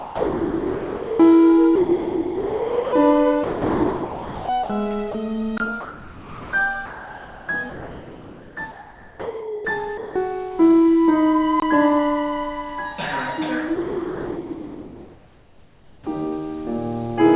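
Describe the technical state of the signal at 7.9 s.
At 7.9 s the sender's voice detector is likely toggling transmission on and off, in the stretch from 5.81 to 10.16 s where the sound is chopped by the voice detector. About 3.3 s of that span is replaced by comfort noise, generated at the receiver instead of real signal. Quieter portions and edges of the sound drop out, so the audio turns choppy, all within the 4 kHz band of the G.711 A-law call path.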